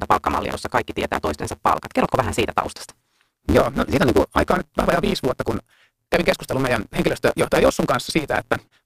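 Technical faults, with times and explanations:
Throughout, block size mismatch (truncated): a steady 138 Hz buzz runs under the speech, which plays 1.6 times too fast at near-normal pitch. Each block is cut short as the next stage reads it, which fits 512-sample blocks trimmed to about 320.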